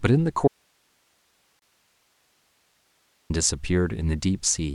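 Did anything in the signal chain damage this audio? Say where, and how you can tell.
Yes, two faults. From 0.48 s to 3.30 s the speech cuts out abruptly and about 2.8 s is lost. What remains is a steady hiss, about 45 dB below the normal signal level, and then the sound returns just as suddenly. The edges are too sharp for a pause or a fade. This is an audio dropout to a faint residue. The wanted signal was likely lost upstream while the stages after the break stayed live and passed their own noise.

Inside that stretch, from 1.59 s to 1.62 s, even the hiss stops for 27.6 ms. The edges of that short silence are smeared, and the noise then carries on unchanged. This is a gap at a join of encoded pieces, created at the codec and storage stage. Separately encoded segments, which fits pieces about 6 s long, were joined without trimming. The encoder's start-up delay and the padding on the last frame stayed in as dead air at the join.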